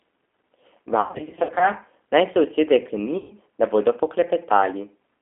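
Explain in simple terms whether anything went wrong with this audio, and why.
Two things went wrong with this speech recording.

The first lasts the whole clip. The speech was squeezed through the G.729 codec, a low-rate phone codec. It doesn't store the sound itself. It stores a rough recipe for the voice and rebuilds it at the other end. Only a narrow phone band, roughly 250 Hz to 3.4 kHz, gets through. So the voice sounds thin and muffled, and noticeably rough and artificial.

The second is VoIP packet loss concealed by the speech codec. It happens twice. From 1.01 to 1.68 s, small pieces of the stream went missing, about 320 ms in total. The longest single gap was 80 ms. The decoder filled each hole by stretching the last bit of voice it had, getting quieter each time. That gives a smeared, fading buzz or noise. The same happens from 3.18 to 3.33 s, with about 120 ms lost.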